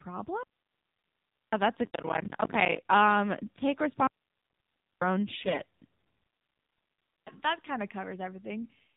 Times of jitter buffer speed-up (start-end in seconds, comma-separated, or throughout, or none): none